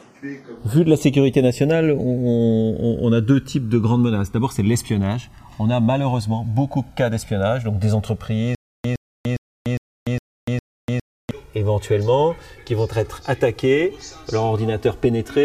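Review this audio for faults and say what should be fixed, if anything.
Channels drifting apart runs throughout: the two sides slide against each other, roughly 150 ppm apart, reaching about 3 ms of offset, so mono sums flange slowly. Lock both devices to a common word clock, or resample one to the other.

Stutter with silent gaps from 8.55 to 11.31 s: a 114 ms burst repeats six times, every 408 ms, separated by 294 ms of digital silence. This is likely a stalled player or stream. Increase playback buffering and make stall recovery resume at the current position rather than replaying the last fragment.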